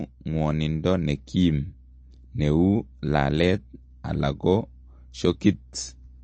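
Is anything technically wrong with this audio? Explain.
Yes. Throughout the speech there is plainly audible codec damage, likely from MP3 compression at a low bitrate, around 33 kbps. The encoder cut everything above 8.3 kHz, so the top end is dull. Weak frequency lines flicker between frames, giving a watery, swirly texture.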